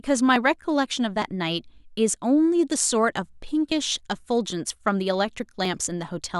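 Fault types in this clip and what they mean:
Dropped buffer (overrun): five small forward jumps in the speech, each skipping roughly 10 ms, likely from samples overwritten before the program collected them.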